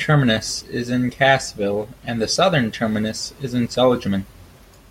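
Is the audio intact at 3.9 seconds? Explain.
Yes, the speech at 3.9 seconds plays through intact, with no dropout, click, distortion or other fault at that moment.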